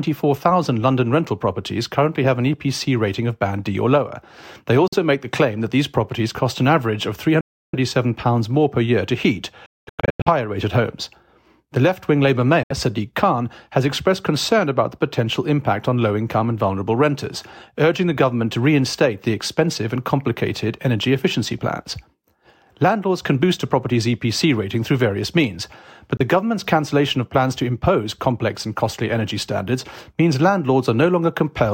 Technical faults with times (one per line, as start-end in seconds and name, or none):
4.88-4.94 Bluetooth dropout
7.41-7.75 Bluetooth dropout
9.66-10.28 Bluetooth dropout
12.63-12.72 Bluetooth dropout
26.17-26.21 Bluetooth dropout